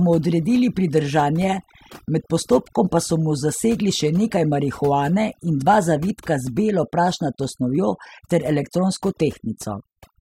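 Overdone noise removal runs throughout: the reduction cut bands near its noise estimate too hard, leaving near-silent twinkling gaps and taking quiet parts of the voice with them.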